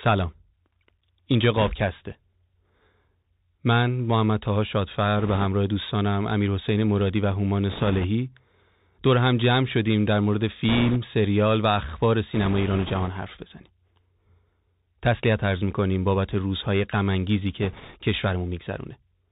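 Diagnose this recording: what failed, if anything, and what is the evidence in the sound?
Bluetooth CVSD headset codec damage runs through the whole speech clip, at the codec stage. Nothing is heard above about 4 kHz. A grainy hiss sits under the speech, s sounds come out scratchy, and loud bright passages distort where the delta modulator's adaptive step cannot keep up with fast rises. The single-bit, up-or-down coding fits a 64 kbps CVSD headset link.

Bit errors on a Bluetooth voice link appear at the network or radio stage in six bursts: 1.57–1.72 s, 5.18–5.46 s, 7.70–8.06 s, 10.69–10.97 s, 12.34–13.09 s and 17.62–17.98 s. Each burst adds a rushing, crackly noise and no sharp clicks. That fits flipped bits at a rate of a few percent. In CVSD every bit carries equal small weight, and the decoder's adaptation lets each error fade, so the damage spreads into noise.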